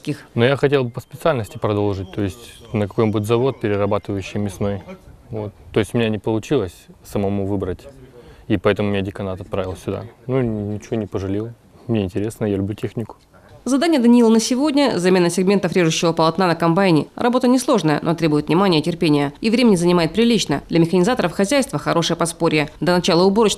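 No technical fault can be heard anywhere in the audio. Nothing breaks, drops out or changes character at any point.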